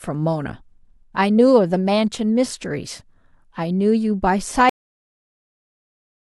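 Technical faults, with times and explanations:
4.69 s: cut-off end. The speech stops abruptly in the middle of a sound at 4.69 s, with no natural decay or tail, and the remaining 1.5 s to the end is flat digital silence. The final stretch of audio was never written out or played back, so the last buffers are missing. Their absence leaves the signal ending at full level and then nothing, rather than fading or finishing the utterance.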